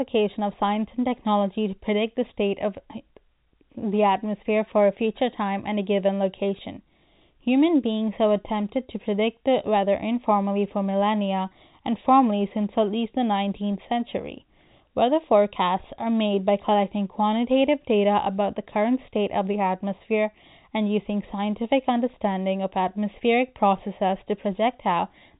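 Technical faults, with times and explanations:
No technical faults found; the speech runs over ordinary G.711 telephone coding, so nothing above about 3.8 kHz comes through, which is expected for that channel.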